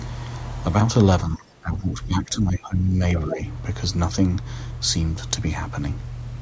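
From 1.24 to 3.0 s the speech keeps sinking and chopping out, with the deepest dip at about 20 dB, and altogether around a second and a half of it gets eaten. That pattern points to speech suppressed in double talk, most likely the echo canceller mistaking the talker for loudspeaker echo while the far end was also speaking, and ducking both. A much milder dip of a few dB follows briefly at 3.26 to 3.4 s.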